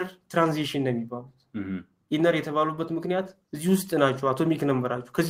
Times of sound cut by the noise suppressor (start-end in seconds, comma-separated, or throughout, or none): 0.11-0.32, 1.24-1.55